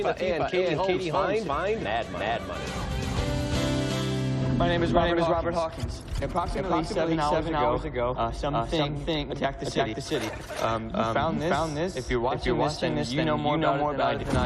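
Every sound in the clip arrives twice, the second copy trailing by roughly 400 ms at about the same level, full-band and dry, with no decay or room colour. That is a doubled audio track, likely from the same audio being captured again through a slower path and mixed in.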